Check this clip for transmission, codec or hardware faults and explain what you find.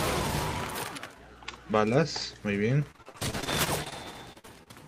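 The clip has repeated packet loss (robotic sound) in two bursts: 2.91 to 4.05 s and 4.33 to 4.68 s. Packets kept arriving lost or late, and the receiver patched each hole by stretching the preceding sound forward, with gaps up to 54 ms and 42 ms. About a quarter of the first stretch and a third of the second is fill. The sound turns choppy, with short pieces missing and repeats of the preceding sound in their place.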